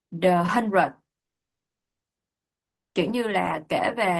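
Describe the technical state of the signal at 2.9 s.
At 2.9 s the signal sits inside a gap running from 2.70 to 2.97 s, most likely a long network dropout. For about 0.26 s no new audio reaches the output. The receiver fills the hole by extending the last sound, which decays into a buzz-like tail and then silence. Playback resumes at 2.97 s, and the speech from the gap is simply absent rather than delayed.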